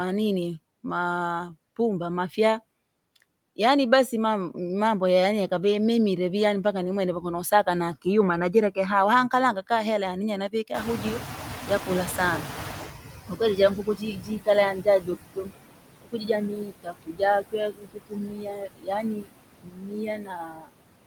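Noise suppressor artifacts run throughout the clip. Steady background noise is cut by about 21 dB. On a spectrogram this appears as patchy, flickering speckle between phrases instead of an even noise floor.

Speech cut by the noise suppressor first occurs from 7.21 to 8.77 s, just after "yaani mpaka ni mwenevyo". Soft sounds are pulled down by up to about 15 dB, for a fraction of a second in total. It recurs from 10.49 to 11.02 s, after "hela yani yee", with dips of up to about 18 dB. In both places the speech sounds swallowed, and the spectrogram shows missing high-frequency consonant energy while the waveform shows shrunken edges.

Around 10.5 s the room noise jumps by about 22 dB and sits roughly 9 dB below the speech. This triggers the noise suppressor catching up from 10.74 s. Its noise estimate lags, so the noise first comes through with less reduction. It then sinks over about 3.2 s to roughly 16 dB of cut by 13.93 s. 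A waveform shows the raised floor tapering away, and a spectrogram shows a broadband band that fades gradually.

During that stretch, speech is clipped again from 11.67 to 12.45 s by up to about 9 dB. Then from 13.28 to 20.69 s it is cut by as much as about 22 dB, with around four seconds affected in total. This leaves faint, gappy syllables and hollowed-out spectrogram patches.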